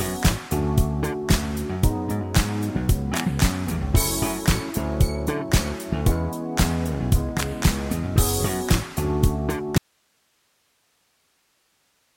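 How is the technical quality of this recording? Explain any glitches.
One fault. From 9.78 s to the end, an audio dropout to a faint residue: the signal cuts abruptly to hiss roughly 45 dB down, likely a lost source while the downstream path stayed live.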